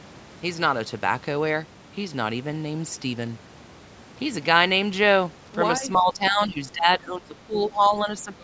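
In a speech recording, the likely cause is an echo canceller that, with both sides talking at once from 5.8 s to the end at 8.43 s, turns its own talker down. The result is speech suppressed in double talk: the voice dips by as much as about 15 dB and breaks up for roughly one and a half seconds in total.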